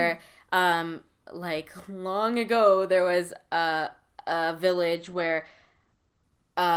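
Call bitrate drop at 4.96–6.76 s: the encoder, apparently starved down to 13 kbps, cuts the band from 20 kHz to 8 kHz, leaving the speech muffled and rough.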